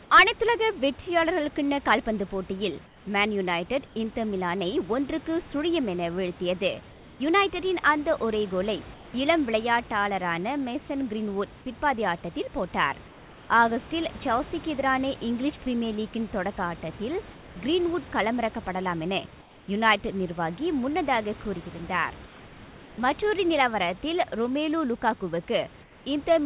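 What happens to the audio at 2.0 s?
Nothing goes wrong at 2.0 s: the speech there comes through intact, carried by the narrowband G.711 call path with the room's background noise sitting about 23 dB below it.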